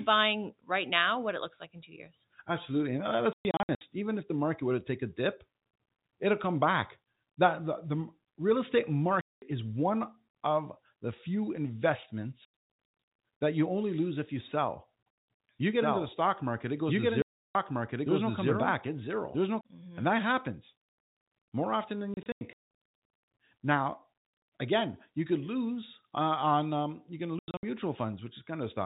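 Packet loss filled with silence punches hard-edged holes into the speech at 3.33, 9.21, 12.45, 17.22, 22.14 and 27.39 s. The gaps come in steps that fit 30 ms packets.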